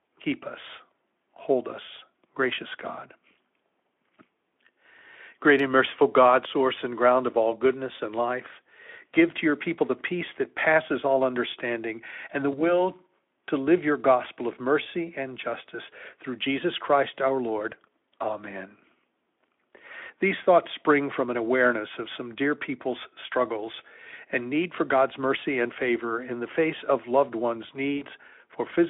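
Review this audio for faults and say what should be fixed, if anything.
VoIP packet loss concealed by the speech codec occurs at 0.67–0.71 s, 12.51–12.82 s and 27.97–28.03 s. About 20, 20 and 40 ms went missing. The decoder stretched its last pitch and filter. Speech turns buzzy or noisy, fades, then recovers slowly. Forward error correction with a deeper jitter buffer would prevent it.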